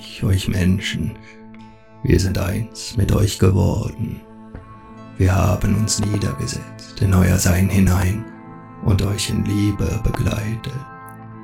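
Loud pops at 6.03–6.17 s and 7.87–8.04 s (each a double pop), then a single one at 10.14–10.17 s, peaking roughly 10, 15 and 10 dB above the signal. These are likely voltage spikes from a switch, plug or static, heard as sharp thumps over the continuing sound.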